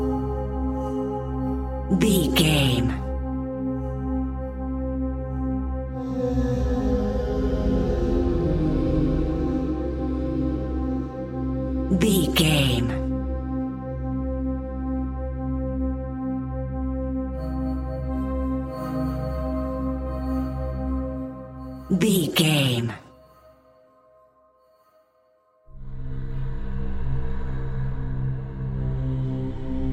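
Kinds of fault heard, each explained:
Sample clock jitter: the converter's clock wobbles by something like a microsecond, so samples land slightly early or late, and the steep, bright parts of the waveform take the biggest hit. Here it's a faint hiss riding along, roughly 45 dB down, throughout.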